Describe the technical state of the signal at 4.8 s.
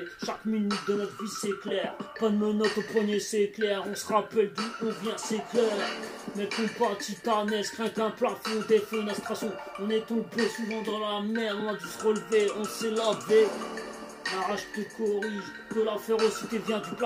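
At 4.8 s the signal is intact, with no dropout, distortion, glitch or other technical fault.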